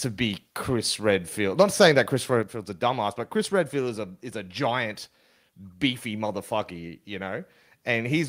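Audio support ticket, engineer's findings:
Microphone volume stepped down at 1.41 s, about 1 dB, and again at 2.43 s, about 4 dB, just before "a dumbass but". Waveform envelope drops abruptly; likely call software cutting input gain.

Microphone overload, 1.59 to 1.99 s, peaks driven about 4 dB past the converter's limit, a small fraction of samples clipped. Flat-topped waveform, broadband smear on spectrogram; likely converter limit from excessive input volume.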